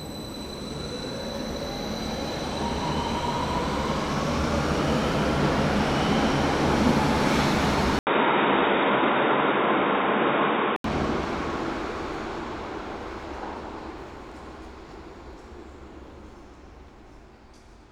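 At 7.99 s there's an 80 ms gap, then until 10.84 s the sound goes dull and boxy, nothing above 3.8 kHz, with faint new hiss: likely the input switched to a poorer device.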